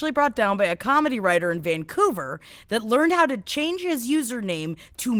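No faults are audible in this speech; the Opus voice coding sounds fullband, with only light codec texture.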